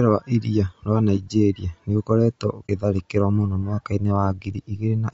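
Right from the start, the speech has a rough, grainy texture, with noise filling in between the harmonics and an artificial top end. That's plainly audible codec damage, likely from low-delay AAC compression (AAC-ELD) at a bitrate that sounds like roughly 32 kbps.

At 2.68 s there's a brief, soft-edged dropout where the sound fades out and straight back in. That's AAC frame loss with muting: the decoder zeroed the missing spectrum, and the gap points to a single lost frame.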